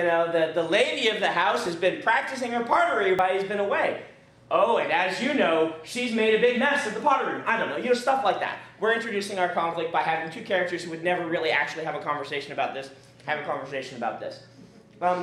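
At 1.66, 3.19, 7.01 and 9.73 s, the sound skips ahead, losing roughly 10, 10, 5 and 5 ms. This is likely a dropped buffer (overrun).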